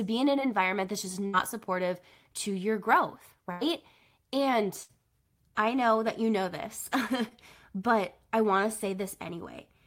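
Runs of consecutive packets were lost or arrived too late in this speech, a burst of packet loss at 1.26–1.35 s (between "that's just" and "supportive to your growth"), 3.51–3.63 s and 4.83–4.91 s. Each time the receiver stretches the last sound into a fading buzz or hiss, then jumps ahead, dropping 60 to 100 ms.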